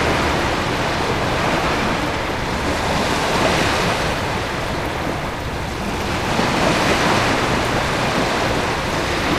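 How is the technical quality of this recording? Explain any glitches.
One glitch stands out. Compressed frames skipped at 7.33 s: around fifteen frames of about 26.1 ms each go unplayed, so the sound jumps ahead roughly 0.4 s.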